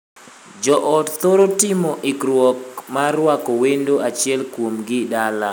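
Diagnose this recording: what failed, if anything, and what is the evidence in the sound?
Nothing failed: across the whole speech recording, no stage of the chain leaves any audible evidence of a fault.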